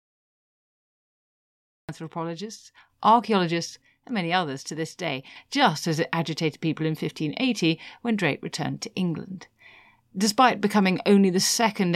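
The recording or stream engaged late, producing a cut-off start. Digital silence runs from 0.00 to 1.89 s, and at 1.89 s the speech enters abruptly mid-sound, with no natural attack or fade, so the first syllable arrives already in progress.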